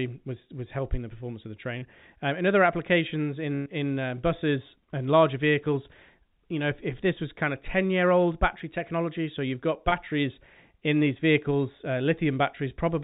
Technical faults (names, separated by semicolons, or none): short concealed packet loss; burst of packet loss; block of digital silence